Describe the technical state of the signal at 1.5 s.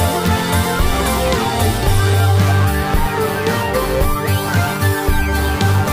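At 1.5 s you're hearing computer activity noise, and it runs the whole length of the clip. Processor, graphics or mouse load is shaking the shared ground, leaving a buzzy chirp pulsing around 150 Hz, roughly 15 dB under the sound, tracking the machine rather than the audio.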